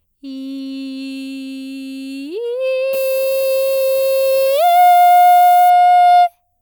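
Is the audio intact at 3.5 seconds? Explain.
No. At 3.5 seconds the music falls inside a stretch of low bit depth with noise shaping, running from 2.93 to 5.70 s. The sound is reduced to only 5 bits. The rounding error from that coarse quantisation is fed back and pushed toward high frequencies. The result is a steady, thin hiss that climbs sharply toward the top of the band. It sits only about 15 dB below the music.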